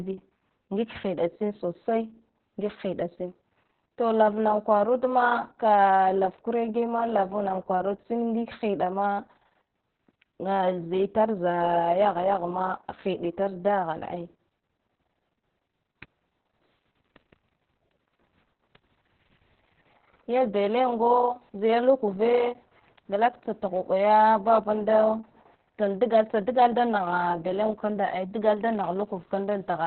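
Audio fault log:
Throughout, Opus voice compression: muffled, hoarse, slightly robotic speech with nothing above 4.2 kHz, which points to narrowband SILK coding at a starved bitrate, around 6 kbps.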